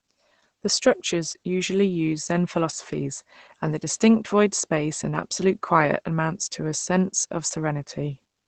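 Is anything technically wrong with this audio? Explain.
Yes. Throughout, the speech sounds muffled and hoarse with a dulled top end, likely from heavy Opus compression in its speech mode, which fits a very low bitrate near 12 kbps.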